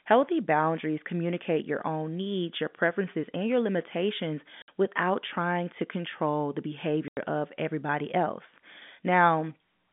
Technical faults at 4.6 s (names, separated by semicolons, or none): packet loss filled with silence